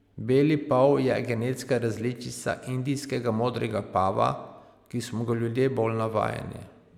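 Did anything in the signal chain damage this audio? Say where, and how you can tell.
No, nothing in the signal chain damaged this speech.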